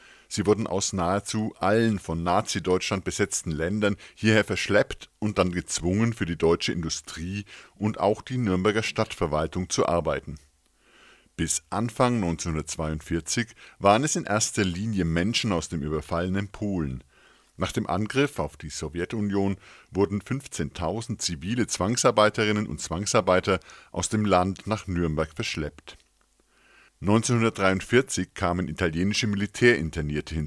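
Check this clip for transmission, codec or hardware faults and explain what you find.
The speech signal stays steady and continuous throughout, with nothing audible that points to a fault anywhere along its path.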